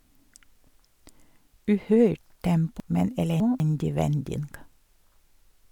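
Between 2.8 and 3.6 s the speech briefly jumbles: chunks out of order, one 200 ms block arriving three chunks late, creating three hard joins.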